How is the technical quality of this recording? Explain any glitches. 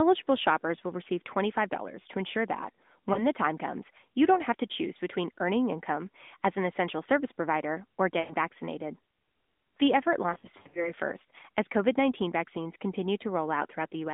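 The recording has three dropouts from lost AMR speech frames on narrowband mobile-style audio limited to roughly 200 Hz to 3.6 kHz.

At 3.14 to 3.23 s, after "to ensure that", there is a brief dip consistent with a single lost 20 ms frame. At 8.20 to 8.34 s, after "essential service provider or", about 100 ms is lost, so the sound smears and fades. From 10.30 to 10.92 s, about 240 ms of losses are scattered over 440 ms, with runs up to 80 ms, producing repeated warbling gaps.

In each case, the corrupted frames failed their checks. The decoder then replayed the last good pitch and vocal tract parameters at falling gain, and the audio returned briefly weak or rough.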